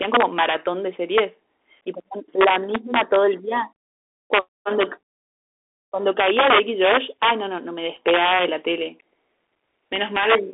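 From the first moment to the last, the speech carries the Bluetooth CVSD headset codec sound. The band sits roughly between 300 Hz and 3.5 kHz, with nothing above 3.8 kHz. The one-bit delta coding, which fits a 64 kbps link, plainly smears the sound: s sounds go scratchy, loud bright moments distort where the adapting step can't keep up, and there's a grainy hiss under everything.

On top of that there's integer overflow, where loud peaks wrap around to the opposite sign instead of being limited, so you hear harsh cracks far nastier than ordinary clipping. It hits at 0.03–0.55 s, 1.18–1.20 s, 2.41–3.16 s, 4.34–4.39 s, 4.80–4.83 s, 6.20–7.31 s, 8.08–8.45 s and 9.96–10.35 s. The peaks go about 4 dB over in the long stretches and only about 1 to 3 dB over in the short blips.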